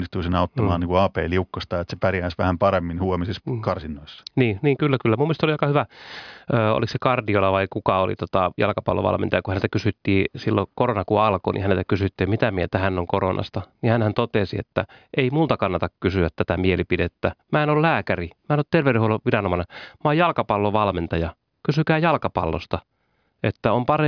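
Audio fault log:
No audible faults detected in this speech recording.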